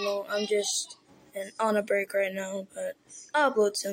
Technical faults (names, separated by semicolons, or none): none